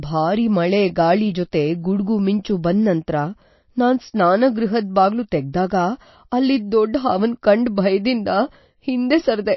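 MP3 compression runs through this whole speech clip: nothing remains above 5.8 kHz, and the watery, swirling texture points to a very low bitrate, likely near 28 kbps. Pre-echo appears at 2.43 s, between "ಜೊತೆ ಗುಡ್ಗು" and "ಬಂದ್ ನಂತ್ರ". An 18 ms hiss comes just before a sharp attack, because the codec spreads its quantisation noise across the whole block, including the quiet moment ahead of it.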